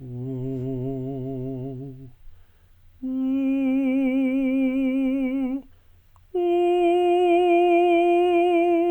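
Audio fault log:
Nothing in the music calls for a fault entry. The log stays empty for this clip.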